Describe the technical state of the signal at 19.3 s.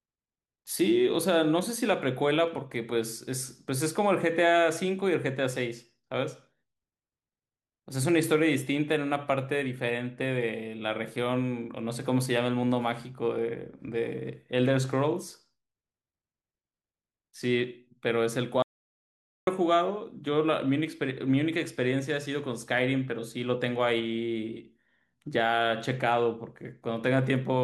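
At 19.3 s the speech has cut out completely: the signal sits at silence, with no room tone or background left, from 18.62 s until the sound returns mid-flow at 19.47 s. That audio dropout to silence lasts about 0.85 s, and whatever was said during it is gone. The likely cause is that the input was briefly lost, through a disconnected device, a failed link or an accidental mute, while the recorder kept writing silence.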